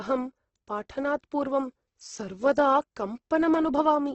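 Throughout the speech, the sound is rough and grainy, with a noisy, hissy texture where clean tones should be and nothing above about 8.1 kHz. This likely comes from heavy Opus compression in its music mode, at a rate that suggests roughly 12 kbps, which fills starved bands with noise.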